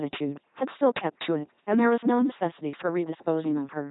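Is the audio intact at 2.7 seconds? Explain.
No. At 2.7 seconds, as across the whole clip, the speech passes through an LPC-10 vocoder. Each frame is resynthesised from a pulse train or noise through a short all-pole filter, giving a buzzy, robotic sound with nothing above 3.9 kHz, consistent with a 2.4 kbit/s rate.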